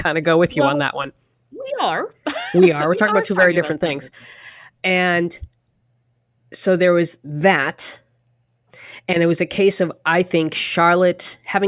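Speech recording with no audible technical faults.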